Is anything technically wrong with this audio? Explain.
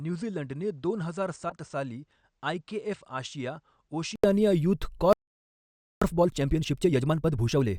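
Yes, there are four faults in this speech clip.

From the start to 4.24 s the sound most likely comes from a poorer input device that the system was using before switching to a better one. The level sits about 10 dB lower, and a faint noise floor sits well below the signal. The sound is dull until a gap of 80 ms at the change, after which it opens up.

From 1.49 to 1.54 s a corrupt frame was decoded. Damaged bits in a few compressed frames were played anyway, putting energy at the wrong frequencies. The result is a brief error sound, peaking around -25 dBFS.

From 5.13 to 6.02 s there is a playback stall. The player likely ran out of data or was blocked, so the output goes silent for about 0.89 s in mid-flow before the sound resumes.

From 6.02 to 7.68 s there is a time-compressed catch-up. To clear the backlog from the stall, the player cuts out and cross-fades small pieces, running at 1.5 times normal speed. 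The speech sounds hurried at its normal pitch.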